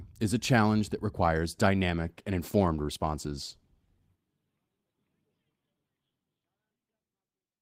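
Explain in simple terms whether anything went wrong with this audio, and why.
From about 1.99 to 4.13 s there's a call bitrate drop: the connection squeezed the audio into far less data, so it turns rougher and duller before recovering.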